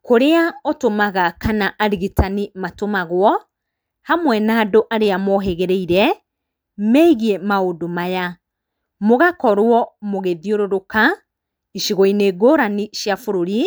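No technical faults can be heard anywhere in this speech recording. Nothing in the sound points to a problem at any stage of its capture, processing or playback.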